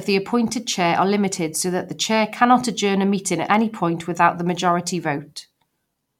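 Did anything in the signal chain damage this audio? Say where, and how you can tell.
No, nothing damaged this audio.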